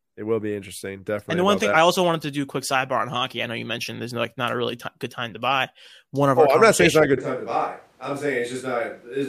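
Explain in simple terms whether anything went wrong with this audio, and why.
Something does go wrong near the end. At about 7.18 seconds, right after "it's not a good", the speech suddenly turns roomy and hollow. It drops a bit in volume, loses some of its low-end warmth, and faint background noise becomes noticeable. It stays that way until the clip finishes. That sudden change is the classic sign of a switch to a distant microphone, most likely because the close mic dropped out and the recording fell back on one farther away.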